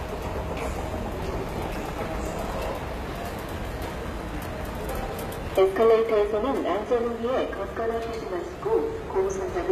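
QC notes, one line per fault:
Throughout: HE-AAC compression, the likely cause of plainly audible codec damage; treble is rebuilt from copied lower bands, nothing above 14.9 kHz, consistent with about 20 kbps.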